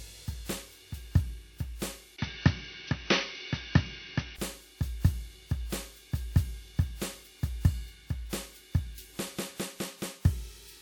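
From 2.16 to 4.39 s the input likely switched to a poorer device, then back. After a 20 ms gap, the music loses everything above 6.1 kHz and turns dull, carrying new background noise roughly 55 dB below it at about the same level.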